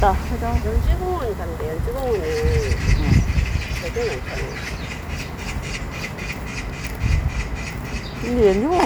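A burst of impulsive interference, likely from nearby equipment or a faulty connection or power supply, gets into this recording of sounds and leaves a train of clicks from 1.88 s until 8.80 s. Around forty clicks of much the same shape arrive at an uneven pace of roughly 5 per second. Each peaks at about the level of the wanted sound, so the ticking is heard over the sound and in its quieter gaps.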